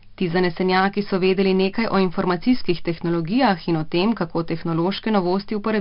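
A gritty hiss rides on every loud syllable from start to finish, attacks sound rough, and nothing reaches above 5.3 kHz. This is heavy 4-bit ADPCM compression: each sample is coded as a coarse adaptive step, and the rate points to roughly 11 kHz sampling.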